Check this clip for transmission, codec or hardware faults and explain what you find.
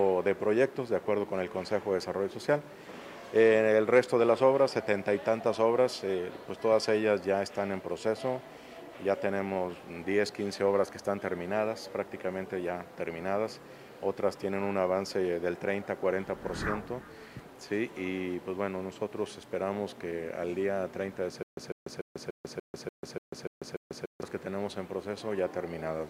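One transmission fault is present. From 21.43 to 24.23 s there is a stutter with silent gaps: a 149 ms fragment repeats nine times, each followed by about 143 ms of digital silence, a steady 292 ms cycle. This likely comes from a stalled stream replaying its last buffer at each retry; the audio due in that span is lost.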